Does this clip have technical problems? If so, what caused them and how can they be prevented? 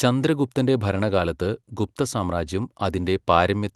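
No, nothing in this speech recording stood out as a technical problem on listening, so there is nothing here that needs preventing.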